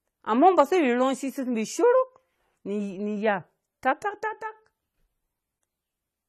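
From start to finish the speech carries plainly audible AAC compression damage. Nothing reaches above 14 kHz, so the highest frequencies are missing and the sound is dull. Sibilants turn fizzy and smeared, and sustained vowels take on a warble. The likely cause is an AAC-LC encoder working at a low rate, around 32 kbps, quantising too coarsely, leaving gaps in the spectrum and cutting high frequencies to save bits.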